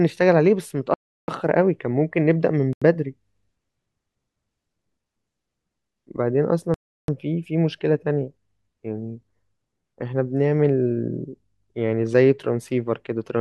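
Speech with three blocks of digital silence, at 0.94 to 1.28 s, 2.73 to 2.82 s and 6.74 to 7.08 s. The longer two last about 341 ms each and the middle one about 85 ms. Each dropout cuts out hard and back around an audible hole. The exact 4:1 length ratio suggests whole output buffers going unfilled, consistent with blocks of 16384 and 4096 samples at 48 kHz.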